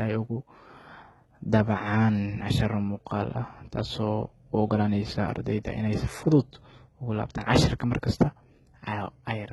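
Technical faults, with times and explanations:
Throughout, likely HE-AAC compression: heavy damage at a rate sounding near 16 kbps, nothing above 11.8 kHz, treble rebuilt by copying lower bands upward, so sibilants sound gritty and metallic.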